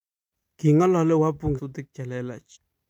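The decoder skipped whole compressed frames, so the speech jumps ahead at 1.54 to 1.60 s, losing roughly 300 ms, and at 2.51 to 2.57 s, losing about a second. Each gap is consistent with several 46.4 ms frames.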